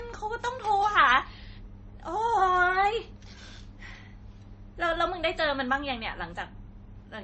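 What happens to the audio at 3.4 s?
At 3.4 s the speech carries the same layered coding damage heard across the whole clip, likely transcoding between lossy codecs: nothing reaches above 8.3 kHz, and artefacts of different character overlap. That mixture of unlike artefacts, rather than one consistent texture, sets it apart from a single low-bitrate encode.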